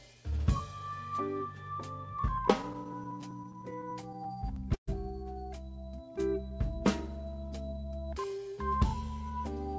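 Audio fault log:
2.62–4.89 s, repeated stalls (stutter): twenty short hold-ups where packets arrived late and the buffer ran dry, so the last sound was stretched, up to 131 ms at a time, 325 ms in all. The sound drags and stumbles without gaps, appearing as repeated, smeared columns on a spectrogram.
7.77–9.31 s, jitter buffer speed-up: with too much audio queued, the receiver cut many pitch-period-sized slices, about 150 ms in total, so playback runs at 107% speed at unchanged pitch and sounds hurried. The waveform shows compressed envelopes, and spectrogram features sit closer together in time.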